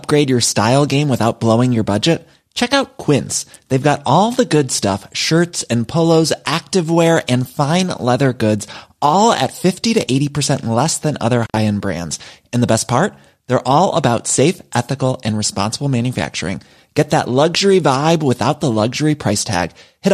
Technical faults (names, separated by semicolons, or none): intermittent contact; hard clipping